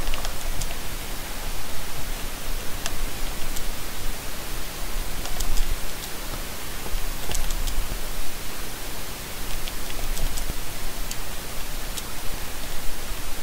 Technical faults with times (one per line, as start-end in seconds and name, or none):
3.17 damaged data in a compressed stream
5.24 dropped buffer (overrun)
5.70 damaged data in a compressed stream
6.68 dropped buffer (overrun)
7.92 dropped buffer (overrun)
10.50 dropped buffer (overrun)
10.73 damaged data in a compressed stream
12.34 dropped buffer (overrun)
13.10 damaged data in a compressed stream